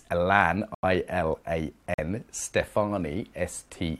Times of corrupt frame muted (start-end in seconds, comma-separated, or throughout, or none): 0.75-0.84, 1.94-2.00